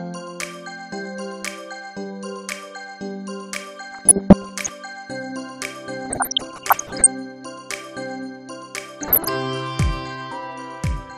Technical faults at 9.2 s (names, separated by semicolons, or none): DAB burbling